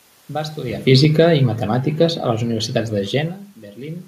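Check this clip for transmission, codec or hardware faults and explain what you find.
One fault is present in this speech. Automatic gain falling from 0.75 to 3.42 s: the gain control judged the input too loud or its background noise too strong and eased its level down by about 5 dB, so the speech and the room noise behind it sink together, unlike the talker's own movements near 0.5 s and 3 s.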